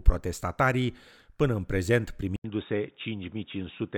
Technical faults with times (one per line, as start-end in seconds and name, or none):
2.36-3.98 input switched to a poorer device